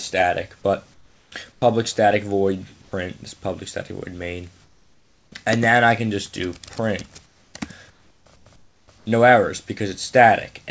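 The audio, carried over a call path whose band stops at 8 kHz (which fits G.722 at 64 kbps), has four stretches of comfort noise in place of the background: 0.94 to 1.62 s, 4.64 to 5.32 s, 7.26 to 7.54 s and 7.90 to 9.06 s. In each, the textured room tone gives way to a smooth, featureless hiss. It is about 8 dB quieter at 4.64 s and about 6 dB quieter at 7.26 s, against a background already sitting about 38 to 39 dB below the loudest sound. This is likely discontinuous transmission, with the receiver synthesising noise while the sender is silent. Unlike a noise gate or dropout, the gap is filled rather than muted, and the fill lacks the real background's detail. At the end of the first stretch, at 1.60 s, there is an onset clipped by the voice detector. About 20 ms of the sound's start is missing, so it begins abruptly with no soft attack. The likely cause is that the detector reopened late. 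This differs from a plain edit cut because comfort noise, not silence, sits right up to the hard start. At 2.82 to 2.92 s, sound is dropped by the voice detector. About 100 ms is replaced by steady noise, and roughly 50 ms of real sound is lost, likely as the detector mistakes the sound for background. Unlike packet-loss concealment, nothing is smeared or repeated. The sound simply gives way to flat noise and then resumes.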